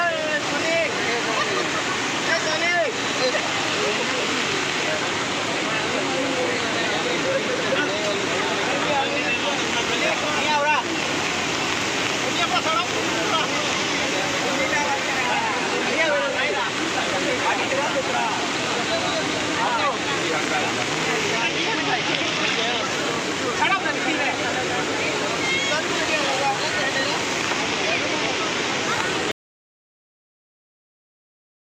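At 29.32 s the sound cuts off abruptly into an audio dropout to silence that runs to the end of the clip, about 2.4 s, likely a lost input while writing continued. The waveform flattens to silence and the spectrogram goes blank, with no room tone.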